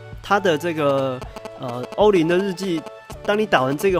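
From 0.89 s to 3.82 s, GSM signalling bursts intrude: a nearby 2G phone's short radio bursts, repeating at 216.7 Hz, get rectified by the audio circuitry. The result is a galloping dit-dit-dit of brief buzzes, sitting roughly 10 dB below the wanted signal.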